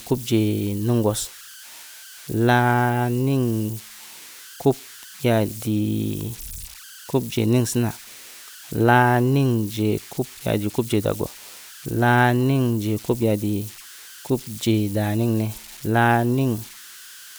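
Speech, with converter idle tones throughout. A whistle near 1.5 kHz sits about 21 dB below the signal. It comes from an undithered delta-sigma converter locking into repeating bit patterns.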